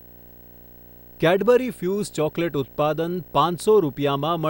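From start to finish the speech sits over video or display buzz, a rasping drone at 59.94 Hz with hash above it and a thin whine at 15.7 kHz, roughly 25 dB below the speech. A screen or video cable is coupling its field and line scanning into the audio path. Unlike mains hum at 50 or 60 Hz, this buzz runs at the video field rate and comes with the high line-rate tone.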